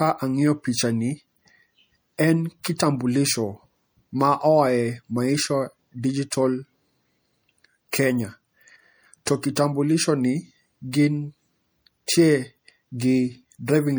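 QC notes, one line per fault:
Throughout, MP3 compression: the speech has likely passed through an MP3 encoder starved of bits, and the damage is plainly audible, which fits a low bitrate around 64 kbps. With too few bits, the encoder drops weaker frequency lines, which switch on and off from frame to frame. The result is watery, swirling speech with metallic chirps on s sounds and smeared consonant attacks.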